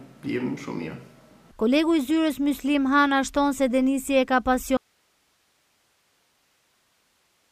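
The signal path likely lost its source at 4.77 s while the chain downstream stayed live, an audio dropout to a faint residue: the audio cuts off abruptly rather than fading, and from there to the end only hiss remains, roughly 45 dB below the signal level.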